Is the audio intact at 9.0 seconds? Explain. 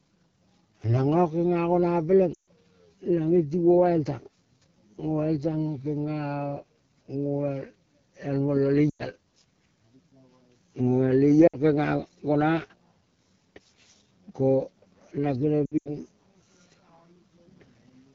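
No. Lost AMR speech frames hit from 8.90 to 9.02 s, just after "el mola". The decoder repeats the last good settings at falling gain, so the sound drops to near silence within two frames; five 20 ms frames, 100 ms in all, were lost. The AMR wideband (HD Voice) codec also runs throughout with plainly audible roughness, which points to one of its lowest rates, around 8.85 kbit/s.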